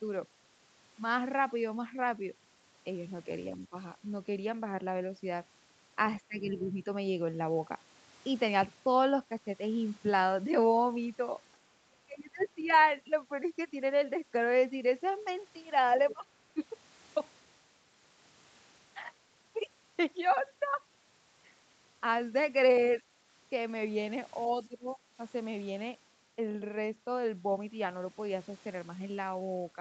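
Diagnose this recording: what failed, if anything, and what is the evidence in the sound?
The stage at fault is call processing: the echo canceller, likely mishandling moments of double talk. The speech suppressed in double talk shows up at 3.5–3.76 s, 6.27–6.86 s, 12.06–12.71 s, 16.13–16.26 s, 16.54–16.63 s and 24.47–24.98 s. The talker's level dips by roughly 10 to 25 dB, deepest in the 12.06–12.71 s stretch. On a waveform these are short notches carved out of the envelope. On a spectrogram they are vertical bands where the energy thins out. Unable to tell the near talker from the loudspeaker echo, the canceller attenuated both.

The same echo canceller also lets some of the other side's voice leak through, at 12.39–12.85 s and again briefly at 16.10–16.14 s. The second voice is faint, roughly 25 dB below the talker in the first stretch and about 15 dB below in the second. On a spectrogram it appears as weak harmonic striations that don't line up with the main talker's pitch. 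The canceller's echo estimate likely left part of the loudspeaker signal in the microphone feed. Its failures cluster where the two fault types overlap near 12.4–12.7 s. The band limit at 8 kHz comes from the call codec path, which points to a wideband Opus setting.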